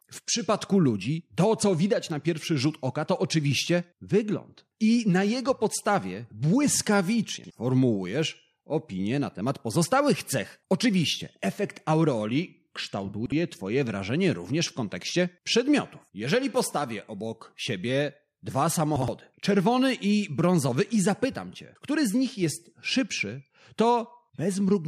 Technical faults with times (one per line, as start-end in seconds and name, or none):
7.38-7.50 chunks out of order
13.14-13.32 chunks out of order
18.96-19.08 chunks out of order